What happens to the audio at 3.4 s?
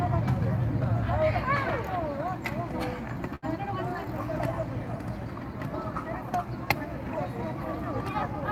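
A short stall from a late packet occurs from 3.35 to 3.44 s. A packet arrived late and the jitter buffer ran dry, so the receiver stretched the last sound for about 71 ms, then resumed without losing anything. The held sound carries a slight buzz or dip, and playback runs 71 ms later afterwards.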